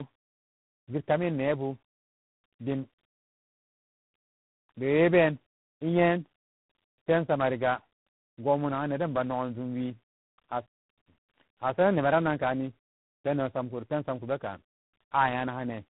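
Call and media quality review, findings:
Tandem speech coding, whole clip: call decoded and re-encoded at each link border, four speech codecs in series, sound consistent with ADPCM, CVSD and AMR-type stages. Each coder compounds earlier errors. Speech rough, warbly and muffled; nothing above 3.8 kHz.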